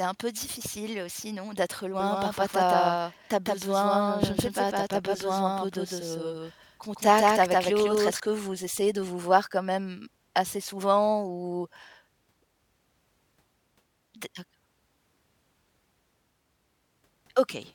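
A doubled audio track runs from 2.0 to 8.2 s, after "difficile aussi non d'être" and before "que vous essayez de". A dry copy of the speech trails about 150 ms behind at roughly equal level and cuts in and out abruptly, likely from a second, slower capture path.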